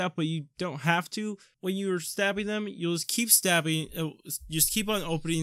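From 3.04 s to the end at 5.42 s, pre-emphasis is left on. The treble boost fits the FM 75 µs curve, but the matching cut was never applied. Highs sit about 13 dB up at 10 kHz. The sound turns thin, bright and sibilant.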